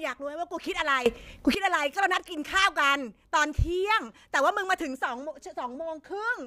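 From 1.06 to 1.55 s the speech and its background noise leap up together by about 17 dB, a sudden gain jump, likely from gain applied without a ramp.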